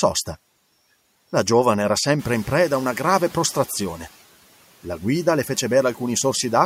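Around 2 seconds the room noise in this speech clip jumps by about 13 dB, to roughly 24 dB under the speech, and the noise suppressor is caught out. From 2.19 s it's still working from its old, quieter noise estimate, so the new noise comes through with little reduction. Over the next 1.56 s the estimate catches up, and by 3.75 s the noise has sunk by about 6 dB.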